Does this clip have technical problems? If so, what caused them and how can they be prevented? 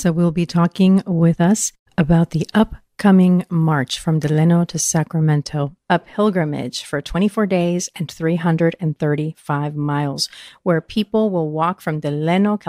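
No, nothing technical trips up this recording, so there's no cause to chase down and nothing that needs preventing.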